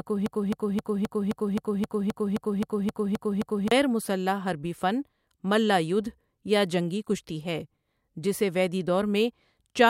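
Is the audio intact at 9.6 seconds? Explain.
Yes, at 9.6 seconds the speech plays through intact, with no audible fault at that moment.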